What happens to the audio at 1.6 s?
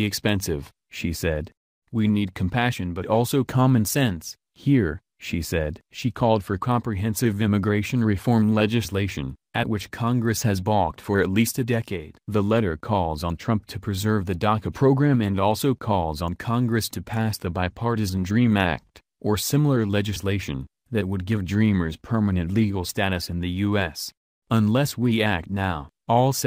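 Nothing goes wrong at 1.6 s; the audio plays through that moment intact, with no dropout, click or distortion.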